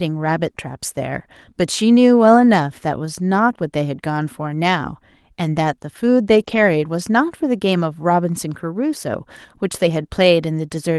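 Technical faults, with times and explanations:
6.35–6.41 s, lost packet rebuilt from error correction: about 40 ms, consistent with two 20 ms packets, is replayed from low-bitrate Opus redundancy copies, so it sounds rougher and noisier but has no gap.
6.43–6.47 s, short concealed packet loss: a 20 ms hole is filled by extending the preceding sound before blending back, which produces a brief smear or wobble.
6.47–6.57 s, lost packet rebuilt from error correction: about 60 ms, which fits three lost packets, is decoded from the coarser redundant copies carried in the following packets, giving grainier, noisier sound without any dropout.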